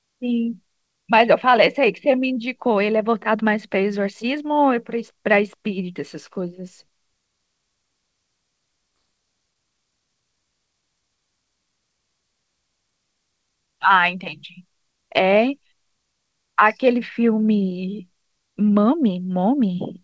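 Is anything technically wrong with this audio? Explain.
Yes. There are two faults close together in this speech clip, around the 9-second mark.

Skip ahead at 8.96 s: A block of speech, roughly 0.7 s of it, was dropped while later audio was already queued, and playback resumed from later material. Nothing was inserted to cover the cut, so the speech jumps forward abruptly, with the two sides butted together and a chunk of the utterance simply gone.

Jitter buffer speed-up from 9.05 to 11.18 s: Even after that drop, the buffer was still running above its target delay, so it kept trimming out short pitch-period-length slices in quick succession, removing around 0.3 s in total. Over those two seconds the speech plays at about 114% speed with the pitch unchanged, so the talker sounds briefly rushed before settling back to a normal pace. Throughout, the audio stops at 8 kHz, which fits a wideband call codec such as G.722.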